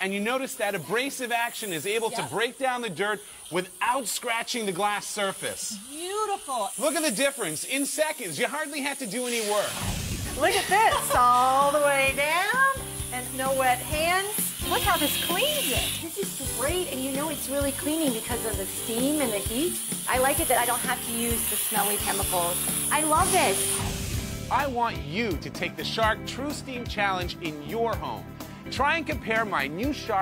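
Nothing stood out as a technical problem on listening.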